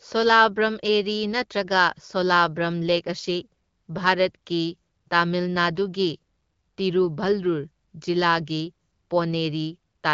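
No technical faults can be heard in this recording.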